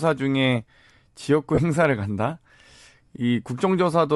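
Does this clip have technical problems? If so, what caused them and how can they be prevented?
Yes. The speech has a grainy, breathy edge throughout, with noisy upper frequencies. This is likely Bluetooth LC3 compression, at a rate fitting about 48 kbps. Prevent it by using a higher LC3 bitrate or a wired connection.

From 1.55 to 1.60 s, a 30 ms noisy smear appears, which fits three lost LE Audio frames. The decoder refilled the gap by reusing the last spectrum with random signs. Prevent it by keeping the Bluetooth link close and free of interference.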